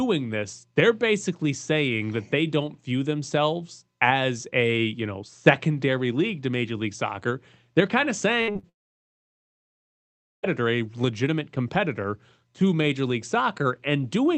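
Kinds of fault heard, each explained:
Burst of packet loss: from 8.41 to 8.50 s, about 60 ms of audio failed to arrive, and the receiver stretched the last sound across the hole while turning it down. It comes out as a brief fading buzz or hiss, and the sound then resumes with that stretch missing.
Short concealed packet loss: at 8.52 to 8.57 s and again at 8.59 to 8.65 s, roughly 40 ms each time reached the decoder too late. The receiver continued the previous sound and blended back in, giving quick smears or wobbles right after the first burst.
Long network dropout: from 8.69 to 10.45 s nothing usable arrived for about 1.7 s, likely a network outage. After a short fading continuation of the last sound, almost the whole stretch is silent, and the audio returns further on without the lost part.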